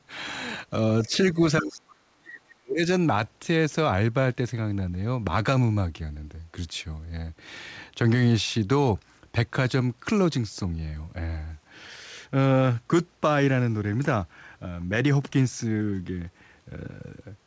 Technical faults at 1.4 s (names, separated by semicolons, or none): speech suppressed in double talk